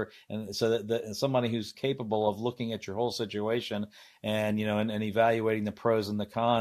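No technical faults can be heard anywhere in the recording. There is nothing to place on a timeline.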